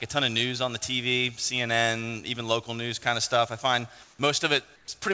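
Near the end, the real background drops out twice and a flat, featureless hiss takes its place, from 4.04 to 4.19 s (150 ms) and from 4.76 to 4.88 s (120 ms), sitting about 2 dB and about 4 dB lower respectively. This is comfort noise in place of the background, likely from discontinuous transmission: the sender went quiet and the receiver synthesised shaped noise. The audio carries nothing above 8 kHz, consistent with a wideband call codec.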